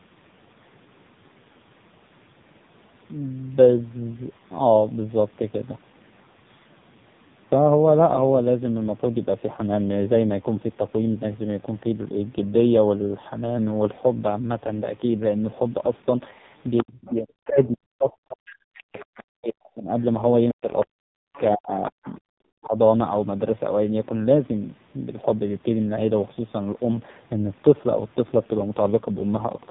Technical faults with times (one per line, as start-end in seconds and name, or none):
0.00-29.70 AMR narrowband mobile codec
16.77-17.66 other side's voice leaking through
16.83-19.93 speech suppressed in double talk
18.48-19.21 other side's voice leaking through
20.51-21.38 other side's voice leaking through
20.52-22.77 speech suppressed in double talk
22.03-22.17 other side's voice leaking through